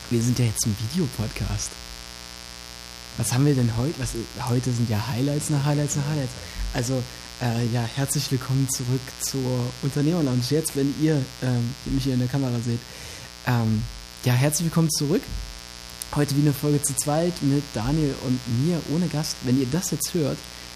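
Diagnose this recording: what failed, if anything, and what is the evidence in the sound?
Mains buzz runs through the whole recording, a steady, raspy 60 Hz buzz sitting fairly high, roughly 15 dB below the sound. It points to the analogue wiring: a dimmer, rectifier or unshielded cable injecting switching spikes twice per mains cycle, spraying harmonics into the kilohertz range.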